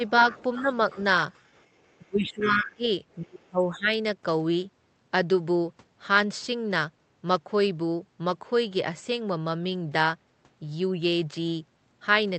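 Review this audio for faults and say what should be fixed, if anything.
Speech suppressed in double talk occurs at 0.0 to 0.04 s, 0.62 to 0.97 s, 2.01 to 2.87 s and 3.22 to 3.96 s. The talker's level dips by about 5 dB at first, then about 10, about 20 and finally about 25 dB. The likely cause is an echo canceller that, hearing both sides at once, pulled down the whole signal. On a waveform these appear as sudden sags in the envelope. A spectrogram shows the talker's harmonics fading or breaking into patches. Prevention: use a double-talk detector that freezes adaptation and limits suppression while both sides speak.

The other side's voice leaking through is heard from 0.07 to 1.96 s, sitting roughly 20 dB below the talker. It returns from 2.27 to 2.66 s at roughly 15 dB below, overlapping the deep suppression there. This is likely residual loudspeaker echo that the canceller failed to subtract from the microphone. 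A spectrogram shows a faint second set of harmonic traces running underneath. The waveform barely changes because the leak is quiet. Prevention: lower speaker volume or use a headset, and let the canceller fully converge.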